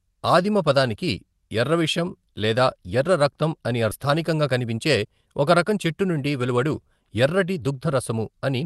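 At 3.91 s there is a skip ahead: roughly a second of speech never plays, and the two sides butt together with no gap, visible as an abrupt waveform splice.

From 4.05 to 5.22 s a jitter buffer speed-up runs the speech about 9% faster at unchanged pitch, trimming around a tenth of a second. Pitch-period pieces are removed, so spectrogram harmonics stay level while syllables compress.

A second speed-up from 5.70 to 8.63 s, about 8% faster, removes roughly 0.3 s and makes the ending sound hurried. On the spectrogram, content above about 12 kHz is absent, which fits an Opus call path.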